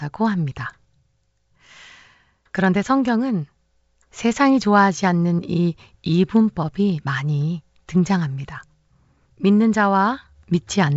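No technical faults can be heard anywhere in this speech clip. It has the sound of G.722 wideband telephone coding, with nothing above about 7.7 kHz and at most a faint trace of coding noise, which fits the full 64 kbit/s mode.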